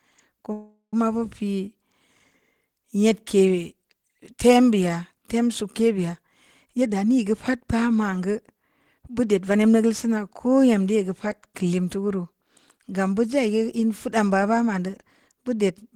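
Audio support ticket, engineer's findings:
Call audio freeze, 0.52–0.94 s: last sound stretched into a fading buzz or hiss, then about 110 ms of silence. Likely jitter buffer underrun from held-up packets; nothing lost, about 400 ms of delay added.

Jitter buffer speed-up at 6.65–7.56 s (120%, roughly 0.2 s trimmed), 9.08–9.60 s (110%), and 14.78–15.91 s (109%): speech sounds hurried at the same pitch, with the receiver trimming pitch periods to drain excess buffer.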